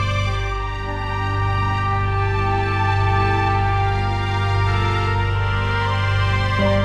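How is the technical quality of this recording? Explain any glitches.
No glitches turn up here at all, so there's nothing to explain and the recording simply runs along without a hitch.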